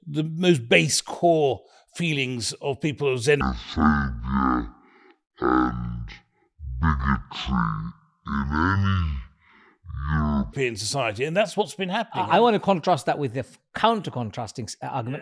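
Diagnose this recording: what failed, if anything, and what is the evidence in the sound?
Wrong sample rate at playback, 3.41 to 10.53 s after "feelings of people of": speech runs at half speed, an octave lower, fitting 44.1 kHz material clocked near 22 kHz; spectrogram harmonics halve and waveform stretches.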